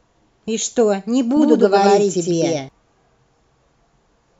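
A speech recording with a doubled audio track from 1.37 s to 2.69 s: a second full-band copy runs roughly 100 ms behind and about as loud as the original, then both its start and stop cut in and out abruptly. Unlike room echo or reverb, the copy has no decay tail and no room colour, just a clean repeat at a fixed lag. The likely cause is the signal being captured again through a slower path, or an edit leaving two copies out of step.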